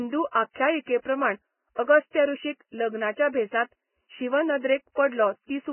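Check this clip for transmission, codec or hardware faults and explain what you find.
One fault runs through the whole speech clip: heavy Vorbis compression is the likely cause. The encoder appears to have run at a very low bitrate, something around 10 kbps, so it discarded everything above 3 kHz and quantised the remaining band coarsely against its spectral floor, swapping fine detail for noise of similar energy. The speech sounds dull and band-limited, with a grainy, hissy texture, roughened tones and smeared consonant onsets.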